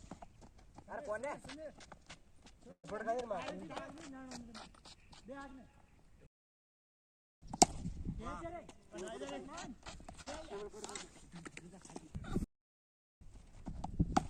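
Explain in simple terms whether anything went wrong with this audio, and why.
Several things go wrong, all typical of audio sent over a network and then played back.

At 2.71 to 2.86 s there is a call audio freeze. The last sound is carried on for a moment, then goes quiet for about 90 ms before the audio resumes exactly where it stopped. Nothing is lost, but the audio now runs about 0.12 s later than before. This is likely because packets were held up on the way and the receiver's waiting reserve ran dry.

There are two playback stalls, from 6.26 to 7.42 s (about 1.15 s) and from 12.44 to 13.21 s (about 0.77 s). In each, the sound simply cuts out mid-flow and stays silent, then carries on. The likely cause is that the player ran out of data or was briefly blocked.

At 10.21 to 10.28 s there is a short stall from a late packet. One piece of audio arrived late, so the receiver held the previous sound for about 51 ms until it came. 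Nothing is missing, but that sound lingers slightly too long.

At 10.40 to 10.43 s there is a short concealed packet loss. About 40 ms of audio never arrived in time. The receiver covered the hole with a very brief patch built from the preceding sound, heard as a small smear or wobble, and the timing jumps about 40 ms forward.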